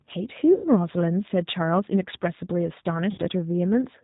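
The whole clip carries G.729 codec sound: nothing above 4 kHz, with a rough, slightly synthetic edge to the speech that fits an 8 kbit/s stream. At 0.54 to 0.68 s, and again at 3.11 to 3.20 s, there's VoIP packet loss concealed by the speech codec. The decoder stretches the last pitch and filter into a buzzy tone or coloured noise that fades, and the speech stays weak or distorted briefly afterwards.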